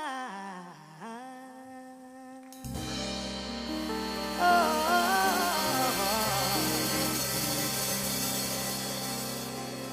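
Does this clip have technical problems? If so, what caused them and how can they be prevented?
No, nothing in the recording points to a technical fault, so there is no cause to trace or prevention to recommend.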